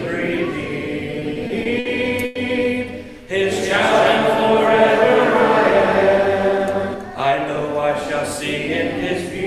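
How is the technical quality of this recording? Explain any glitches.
There are three glitches, all packed into the first seven seconds or so.

From 1.19 to 1.87 s there are repeated stalls (stutter). Packets kept arriving late, so the jitter buffer ran dry five times. The receiver stretched the last sound over about 140 ms in total, so the audio drags and hiccups, but nothing is lost.

At 2.25 to 2.37 s there's a short call audio freeze. The sound hangs as a fading 100 ms continuation, then picks up where it stopped. That's likely packets held up in transit, since the delay stepped up by 100 ms.

From 3.62 to 6.94 s you get a doubled audio track. A clean second copy, about 5 dB quieter, trails by roughly a third of a second. It switches on and off abruptly, likely from a second, slower capture path.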